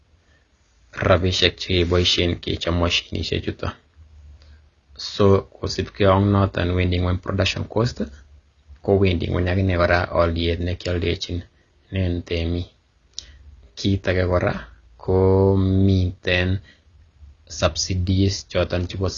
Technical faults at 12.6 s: AAC compression

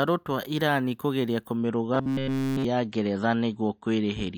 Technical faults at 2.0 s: adaptive stream at a lower bitrate; robotic sound from repeated short buffers

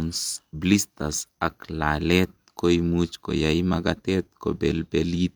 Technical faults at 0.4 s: none

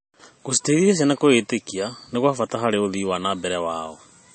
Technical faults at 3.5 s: MP3 compression

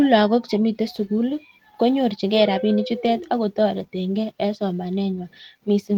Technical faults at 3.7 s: none

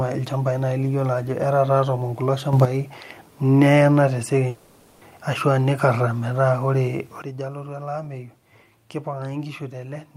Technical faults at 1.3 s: none

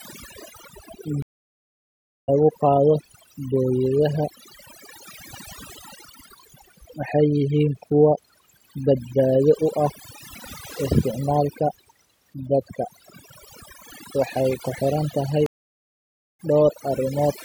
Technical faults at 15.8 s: overdone noise removal; stream reconnect

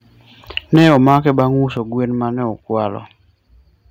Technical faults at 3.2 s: none

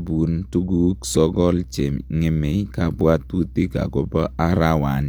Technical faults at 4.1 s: none

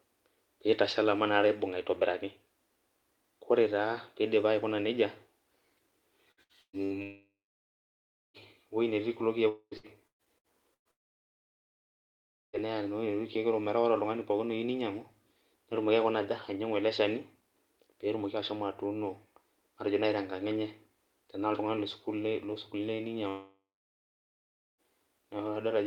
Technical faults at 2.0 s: none

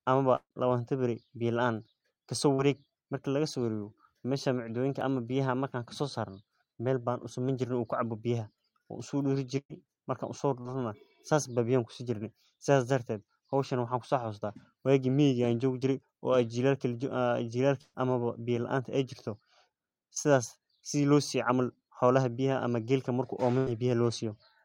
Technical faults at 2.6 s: short concealed packet loss

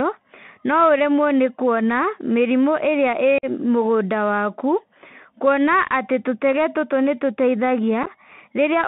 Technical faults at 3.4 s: Bluetooth CVSD headset codec; unconcealed Bluetooth headset packet loss

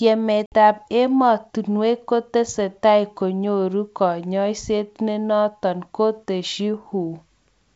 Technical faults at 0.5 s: packet loss on an ADPCM call

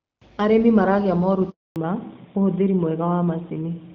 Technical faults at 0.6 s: none

